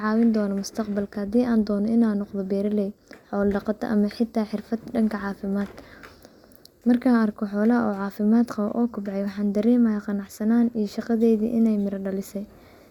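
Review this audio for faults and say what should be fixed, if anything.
Nothing here needs fixing.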